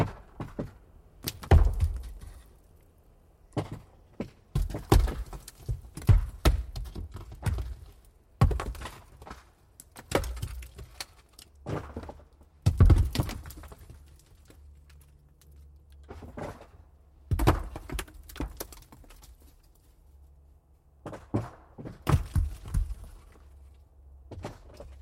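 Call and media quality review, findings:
No audible faults found; nothing to raise against any component.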